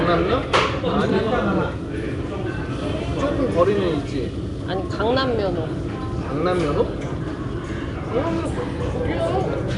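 From start to finish the sound carries a rough, hissy halo and a smeared, watery blur, with the damage plainly audible and nothing present above about 10.6 kHz. The likely cause is Nellymoser compression, the old Flash microphone codec, at a rate that fits roughly 44 kbps. It codes short blocks with a fixed, small bit budget, so weak bands receive no bits and get filled with noise. That substituted noise produces the hiss, and the coarse blocks smear detail.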